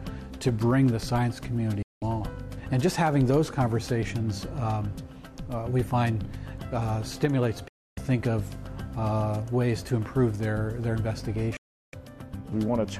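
The audio drops abruptly to silence three times, at 1.82 to 2.02 s, 7.68 to 7.98 s and 11.57 to 11.94 s, with a very quick fade of about 3 ms each time. This is a digital broadcast dropout. The receiver muted on losing or failing frames, and the gaps of roughly 190, 290 and 360 ms suggest whole blocks of about 24 ms going missing.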